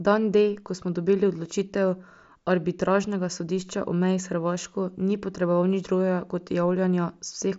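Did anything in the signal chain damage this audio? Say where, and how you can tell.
No, nothing in the signal chain damaged this speech.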